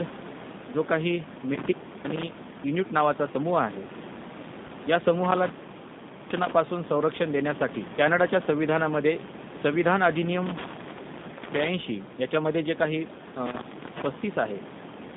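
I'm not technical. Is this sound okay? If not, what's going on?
No. The whole recording went through the G.729 codec, a compressor used for phone calls. It cuts off the high sounds, so the speech sounds narrow, slightly rough and robotic.

From 4.67 to 4.71 s there is VoIP packet loss concealed by the speech codec. A tiny piece of sound went missing, and the decoder filled the gap with a brief, fading guess.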